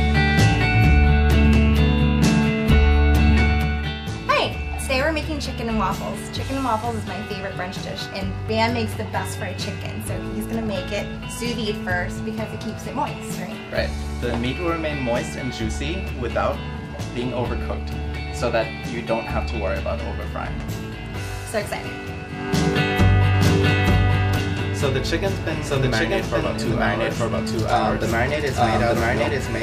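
At 23.34 s a doubled audio track begins and runs to the end. A second copy of the sound enters abruptly. It trails the original by about a second and sits at roughly the same level. It is full-band and dry, with no decay or room colour. The result is a distinct, overlapping repeat rather than an echo. The likely cause is the signal being captured twice, once through a slower path.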